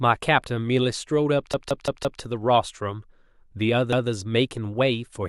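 At 1.54 s a repeated buffer kicks in: a 0.17 s chunk of speech plays four extra times through 2.22 s, a hard-edged stutter that fits an 8192-sample buffer looping when fresh audio was late. It happens again at 3.93 s with one repeat, and nothing seems to go missing.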